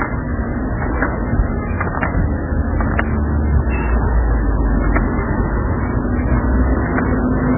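Throughout the audio, nothing sits above about 2.9 kHz, and heavy codec damage leaves a watery, swirling texture with smeared attacks. This is likely MP3 compression at a very low bitrate, around 8 kbps, where the encoder drops weak frequency lines and cuts the treble.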